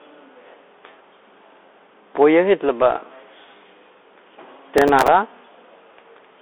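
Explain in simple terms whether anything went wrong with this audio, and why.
Bluetooth CVSD headset codec, throughout the whole clip: the speech passes through the narrowband codec used by Bluetooth headsets. It describes the sound one tiny step up or down at a time, so quick changes outrun it. Nothing above 3.8 kHz gets through, which leaves the speech muffled and telephone-like, s sounds come out scratchy, and a grainy hiss sits under everything. This damage is clearly audible.

Processor overload crackle, from 4.78 to 5.08 s: for about a third of a second, the device was too busy to prepare each very short slice of audio on time, slices of roughly 5 ms. About ten of those deadlines were missed over that stretch, and each miss replayed a scrap of older audio with sharp edges. Together the misses sound like a burst of gritty crackle laid over the speech, which stops once the load eases.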